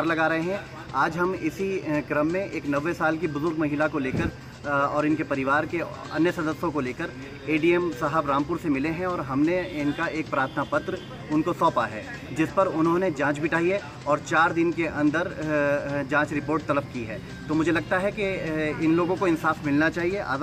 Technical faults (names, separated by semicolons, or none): none